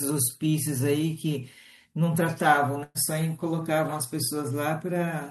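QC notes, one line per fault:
2.83 to 2.98 s, burst of packet loss: the receiver masks the gap by extending the last sound for about 113 ms while fading it, then about 20 ms of silence. The speech resumes with roughly 120 ms of the original passage missing.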